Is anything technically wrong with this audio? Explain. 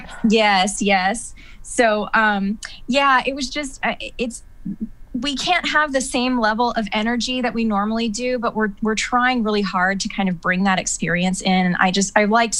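No, nothing is technically wrong with this audio.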